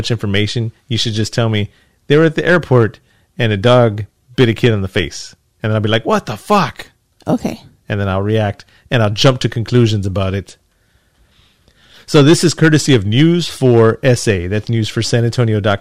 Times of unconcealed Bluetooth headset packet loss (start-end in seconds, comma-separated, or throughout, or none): none